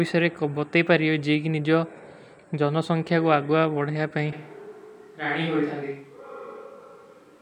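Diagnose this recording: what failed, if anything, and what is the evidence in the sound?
Switch to a distant microphone at 4.33 s, lasting to the end. The speech abruptly turns roomy and hollow, loses low end, drops by about 5 dB, and sits over room noise only around 35 dB below it. Such a sudden change in tone and ambience at the capture stage points to the close microphone's signal failing or dropping out, most likely leaving a camera or room microphone farther away to carry the recording.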